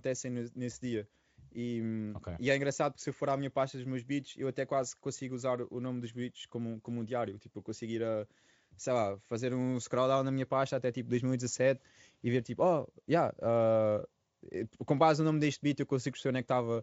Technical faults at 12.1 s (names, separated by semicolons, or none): VoIP packet loss concealed by the speech codec